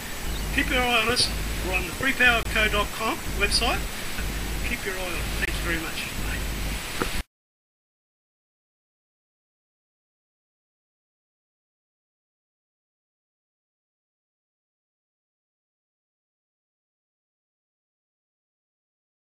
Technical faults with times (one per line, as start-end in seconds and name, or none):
2.43-2.45 gap between chunks
5.45-5.48 gap between chunks